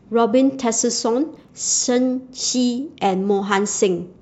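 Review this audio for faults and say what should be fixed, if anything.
A short burst of gritty crackle tears across the speech from 1.36 to 1.49 s. This is processor overload crackle: the processor repeatedly missed its deadlines on tiny buffers of around 5 ms, and about ten were simply skipped, each leaving a hard-edged gap. Preventing it means reducing the processing load during playback or recording, or running with a larger buffer so each deadline is easier to meet.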